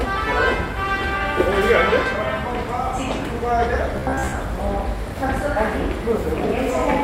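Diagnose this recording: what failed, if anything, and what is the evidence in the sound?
The buffer stage is where things went wrong. From 3.96 to 4.34 s the sound turns into a stiff, metallic buzz pinned at about 66.8 Hz, still loosely tracking the original. That's robotic sound from repeated short buffers, likely a playback buffer running dry. New audio wasn't arriving in time, so the same chunk of about 15 ms got looped over and over, with most of the real material in that stretch simply skipped.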